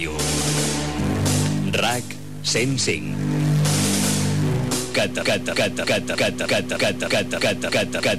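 The audio runs normally until 5.22 s. From there to the end it falls into a broken-record loop. A fragment of about 0.31 s repeats exactly, back to back, ten times. The stream likely stalled and kept resending its last buffer, so the audio that should follow is lost.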